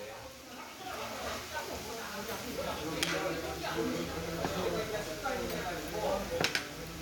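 No technical faults are audible.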